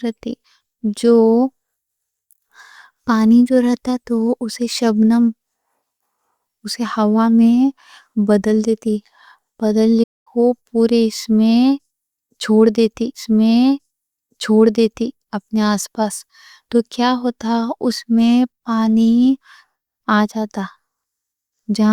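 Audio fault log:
10.03–10.27 s, playback stall: the speech cuts out mid-flow for about 230 ms of silence, then carries on. A gap of this length with a clean restart likely comes from the player's buffer running dry or its output thread being held up briefly.
13.14–15.14 s, stream segment repeated: right after "چھوڑ دیتی" the audio jumps back with a small blip and replays 2 s of speech. The same chunk of the stream was fetched or queued twice, so the listener hears that stretch again.
19.54–21.54 s, periodic USB or driver dropouts: a run of ticks every 0.5 s, about five in all. Each is a tiny loss of a fraction of a millisecond, replaced by silence, which fits a background task stalling the bus or driver at a fixed interval.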